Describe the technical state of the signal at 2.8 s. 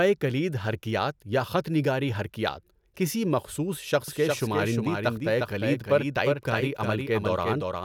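At 2.8 s the speech signal is intact, with no dropout, distortion, glitch or other fault audible at that moment.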